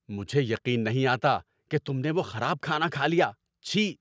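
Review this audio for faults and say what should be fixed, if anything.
Nothing here needs fixing; no faults are present.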